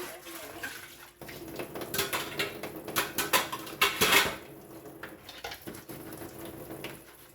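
No technical faults can be heard anywhere in these sounds. Nothing in the recording calls for a timestamp or a fix.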